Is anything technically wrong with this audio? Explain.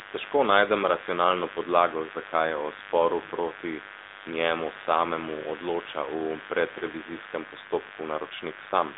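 Yes, two faults run through the whole clip.

Mains buzz is present from start to finish, sitting roughly 15 dB below the speech. Sharp switching spikes locked to the 50 Hz supply produce a dense ladder of harmonics reaching into the kilohertz range, giving a steady, raspy buzz rather than a smooth hum.

The speech has also passed through the AMR narrowband mobile codec for its full length. The line band runs from 250 Hz to 3.7 kHz, with nothing above 3.8 kHz, so the voice sounds thin and telephone-like. The codec rebuilds speech from a vocal-tract model driven by sparse pulses, and its damage is plainly audible as a buzzy, synthetic texture, which fits a mid-rate mode around 10 kbps.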